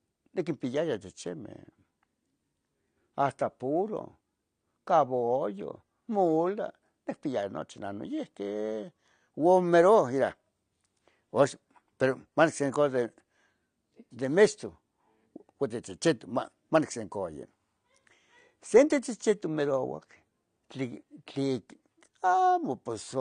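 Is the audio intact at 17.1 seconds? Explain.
No. At 17.1 seconds the speech sounds dull and smeared, with a warbling, fizzy texture on sustained sounds and sibilants and nothing above about 9.9 kHz, and this persists through the whole clip. The likely cause is AAC compression: the encoder lowered its cut-off and starved parts of the spectrum, quantising each frame's frequency lines so coarsely that the damage is plainly audible. That level of loss fits AAC-LC at around 32 kbps.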